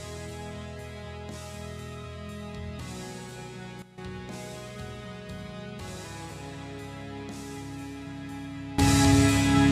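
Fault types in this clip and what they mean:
Sudden gain jump: the level changes abruptly with no fade, and the background noise steps by the same amount as the sound, so the whole signal moves together. At 3.82 s it drops by about 13 dB and recovers at 3.98 s. At 8.78 s it rises by about 18 dB and stays there to the end. The step happens between adjacent samples, likely a gain setting or bit shift applied without a ramp.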